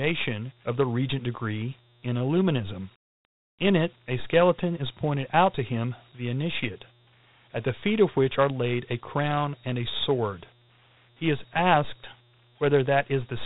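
Dialogic VOX ADPCM throughout the speech: audible grit and hiss trail the signal, and nothing is heard above 3.8 kHz, which fits 4-bit samples at 8,000 per second.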